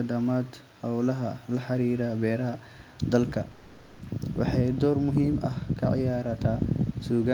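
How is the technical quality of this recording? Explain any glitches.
One glitch stands out, a call audio freeze in this speech clip from 3.51 to 4.01 s. The sound stalls into a fading buzz for about 0.48 s, likely because delayed packets emptied the jitter buffer. Speech then resumes where it stopped, nothing lost, only pushed later. On a spectrogram the last spectrum smears horizontally and dims, and the waveform shows a decaying, repetitive stretch instead of speech.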